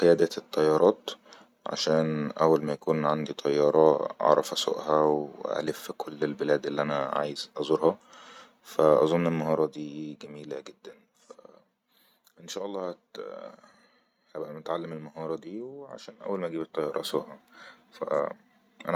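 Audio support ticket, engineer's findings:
Zipper noise, 9.42–9.85 s (after "فأظن ان", before "جميلة جدن") and 16.56–17.07 s (after "اول ما"). Ticking as level drops then rises roughly 10 dB in 2 dB jumps, about ten a second. Probably unsmoothed gain stage stepping per block.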